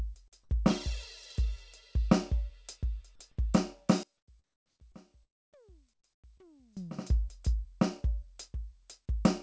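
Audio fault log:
0.28 to 0.34 s, 4.92 to 4.96 s, 6.38 to 6.48 s: short concealed packet loss. About 40 ms of the music is missing at the first point and about 20 ms at each of the others. The decoder bridges each gap by extending the preceding sound, then crossfades back into the real signal. The result is a brief smear or wobble. In the last event the patch runs a few milliseconds long, which nudges the timing slightly.
4.03 to 6.77 s: one channel inverted. When the channels are summed to mono, the level drops by about 28 dB. Material common to both sides largely cancels, and only the difference between channels remains as a faint residue. The likely cause is reversed polarity on one channel for this stretch. Above 8 kHz the band is empty throughout, which fits the G.722 call path and is not part of this fault.
4.18 to 4.28 s, 4.44 to 4.80 s, 5.94 to 6.04 s: comfort noise in place of the background. 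These quiet passages sit about 55 dB below the loud parts. In them the real background gives way to a steady, featureless hiss lasting 100 ms, 360 ms and 100 ms. It is about 6 dB lower in the first two and about 10 dB lower in the third. This points to discontinuous transmission, with the receiver generating noise of the RFC 3389 kind until the signal resumes.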